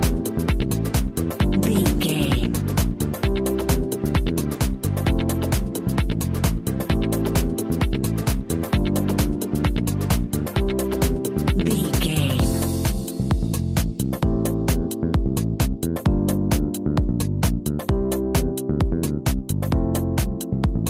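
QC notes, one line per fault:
No fault to note in this clip.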